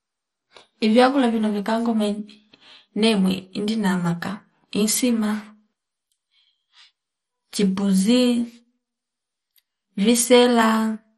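Right through the speech there's heavy MP2 compression: dull, gurgly and granular, nothing above about 13.1 kHz, with upper sub-bands flickering, likely from a starved bitrate around 56 kbps.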